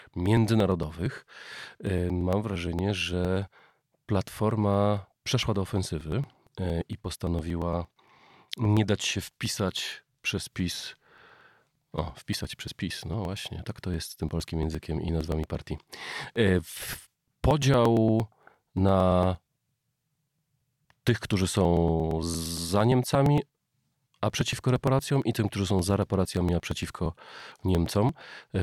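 From 0.14 s to 28.55 s, periodic USB or driver dropouts skip about 10 ms every 0.115 s, giving evenly spaced ticks heard only over speech, unlike random glitches.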